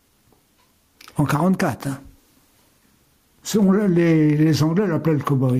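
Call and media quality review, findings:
Gain pumping throughout: swing around 10 dB, sound squashed. Likely input gain set way too hot, fast limiter clamping down.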